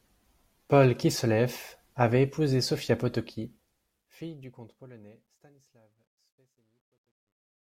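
From about 3.08 s to the end at 7.71 s, the speech fade-out picks up truncation distortion on a fade. The level stage drops bits with no dither, which fits a 12-bit path, so from 5.14 s the tail turns gritty.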